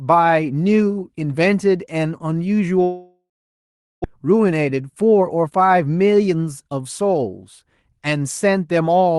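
A long network dropout, likely cause, runs from 2.83 to 4.06 s: the speech decays into a fading buzz or hiss, then about 0.76 s of silence before audio resumes minus roughly a second. A jitter buffer speed-up follows from 4.14 to 5.51 s, trimming pitch periods so speech runs 13% faster, hurried but same pitch, shedding around 0.2 s.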